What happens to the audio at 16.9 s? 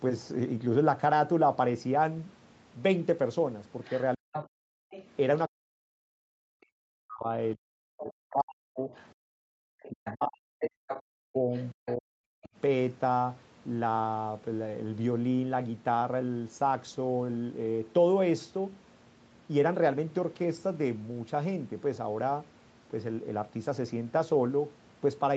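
At 16.9 s the speech carries on intact, with nothing breaking into it beyond the ordinary band-limited sound of a call path that stops at 8 kHz.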